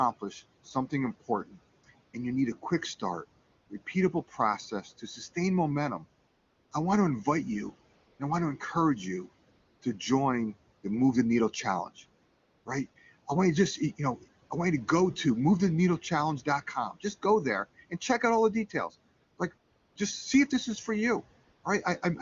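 A speech recording carries two distinct processing faults. The first is speech cut by the noise suppressor, at 1.45 to 1.56 s and again between 4.7 and 5.36 s, where parts of the speech itself dip by about 12 dB and about 10 dB, together roughly a fifth of a second of swallowed, faint sound. The suppressor mistook quiet speech energy for background and pulled it down along with the noise. What sets this apart is that the speech is thinned while the background character stays the same.

The second is AMR comfort noise, heard in thirteen pauses between 1.81 and 21.63 s, lasting from 20 ms up to about 440 ms, the longest near 6.27 s and 12.25 s. In these gaps no speech frames were sent, and the receiver filled them with smooth synthetic noise built from a rough level and spectrum estimate. Unlike the suppressor dips, the real room noise, about 21 dB below the speech, is swapped for a steadier, smoother hiss that switches in and out. 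The AMR wideband (HD Voice) codec at 23.85 kbit/s adds at most faint coding damage of its own.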